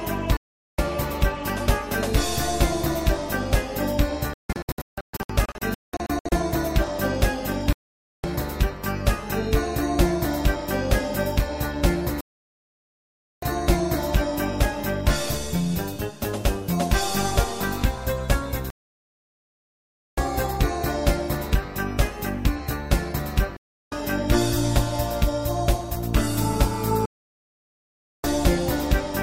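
The signal keeps going through digital broadcast dropouts: at 0.37 s, scattered short holes from 4.34 to 6.32 s, then 7.73, 12.21, 18.70, 23.57 and 27.06 s. The receiver lost valid frames and muted, so the sound cuts to silence for up to about 1.5 s, and whatever was sent meanwhile is gone.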